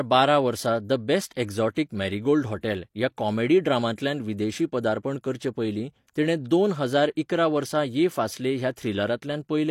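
At 1.75 s and again from 6.14 to 6.16 s there's pre-echo: the codec's block noise leaks ahead of a sharp speech attack, leaving a brief hiss and a smeared onset.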